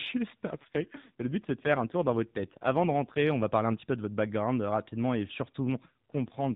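From 0.48 to 3.44 s, just before "parler un petit peu", an AMR rate drop makes the speech buzzier and more synthetic without narrowing the band, consistent with a fall from 12.2 to 5.9 kbps.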